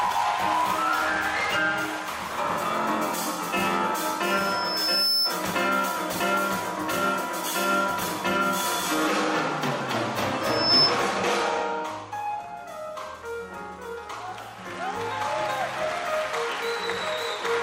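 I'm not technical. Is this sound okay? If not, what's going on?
No. Twice a piercing high whistle swells up over the sound: from 4.23 to 5.39 s it grows over about a second, and from 10.41 to 10.99 s it rises faster and louder, cutting through everything else. This is loudspeaker feedback squeal. A microphone was picking up the loudspeaker it was feeding, so one pitch, here around 5.3 kHz, kept looping round and getting louder.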